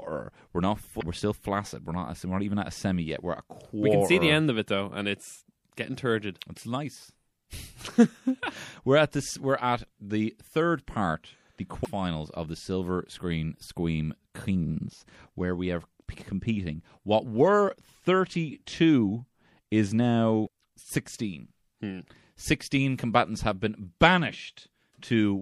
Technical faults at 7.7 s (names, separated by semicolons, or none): MP3 compression